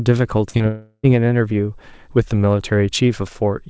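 At 0.50 to 0.56 s and again at 0.58 to 0.62 s there is short concealed packet loss. About 40 ms, then 20 ms, of the speech arrived too late, and the receiver stretched the preceding sound to fill each gap. Each is heard as a brief smear. A spectrogram shows repeated, blurred harmonics there, with the waveform's envelope briefly flattened.

From 0.68 to 1.05 s the audio drops out for about 360 ms, most likely a long network dropout. The last sound is carried on as a fading buzz for most of that stretch, ending in about 50 ms of silence. The waveform thins to a flat line before the speech resumes, and that portion is missing. Throughout, the spectrogram stops sharply at 8 kHz, which fits a G.722 call codec.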